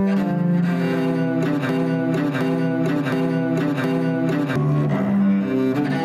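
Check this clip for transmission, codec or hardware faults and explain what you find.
Two faults are present: gain pumping across the whole clip and a broken-record loop in the middle.

Gain pumping, throughout: the gain ducks by around 10 dB under each loud sound, likely from excessive gain driving a fast limiter. The waveform envelope looks flattened and breathing.

Broken-record loop, 1.69 to 4.56 s: a 0.72 s fragment repeats four times back to back, likely a stalled stream resending its last buffer. The spectrogram shows identical repeating blocks.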